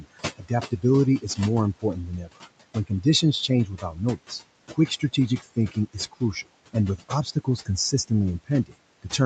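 Throughout the clip, the room noise, which sits about 16 dB under the speech, pumps and breathes. It drops away in the pauses and swells back under each phrase. These are noise suppressor artifacts. The suppressor is pulling the bands it judges to be steady noise down by about 21 dB, one frame at a time, so the background keeps shifting with the speech.

The same processing also cuts parts of the speech itself, in four stretches. From 0.0 to 0.84 s, about a fifth of a second of sound is turned down by up to about 18 dB. From 1.76 to 4.32 s, roughly half a second in total dips by up to about 20 dB. From 4.7 to 8.11 s, close to 0.7 s is pulled down by up to about 19 dB. From 8.44 to 9.13 s, a brief moment drops by up to about 20 dB. In each stretch, the affected speech sounds swallowed or faint. The suppressor mistook these quiet speech components for background noise and attenuated them along with it.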